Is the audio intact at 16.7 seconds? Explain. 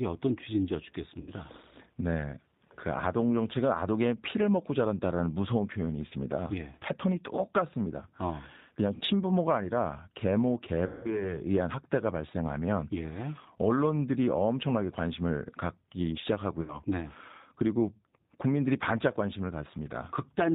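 No. VoIP packet loss concealed by the speech codec covers 16.62 to 16.82 s. About 60 ms of audio went missing, which fits two lost packets, and the decoder filled the hole by extending its last pitch and filter with falling gain. The sound smears into a fading buzzy tone or coloured noise, then stays weak and distorted briefly after the stream resumes.

The G.729 codec also affects this moment, as it does the whole clip. Its sound points to an 8 kbit/s codec that rebuilds the sound from a vocal tract filter, a pitch predictor and a few pulses in each 5 ms half of a 10 ms frame. Nothing above 4 kHz survives, and the speech has a plainly rough, synthetic edge.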